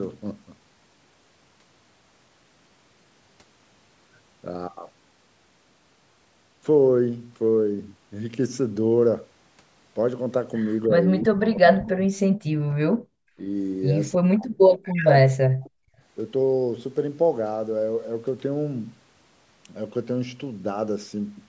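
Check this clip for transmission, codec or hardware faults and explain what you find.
The clip has three echo-canceller faults, clustered between about 10.9 and 15.9 s.

Speech suppressed in double talk, at 10.89–11.1, 11.26–12.77, 13.38–13.43 and 14.15–15.92 s: the speech dips by about 10, 40, 5 and 40 dB respectively. This is likely the canceller ducking everything while both sides talked at once.

Echo leak, at 11.4–11.46 and 14.98–15.08 s: a faint copy of the speech returns 314 ms late, about 15 dB below it. This is likely residual loudspeaker echo the canceller failed to remove.

Background gated by the echo canceller, at 13.05–13.1 s: the room sound briefly drops by about 39 dB as the canceller clamps the microphone during loudspeaker playback, then recovers.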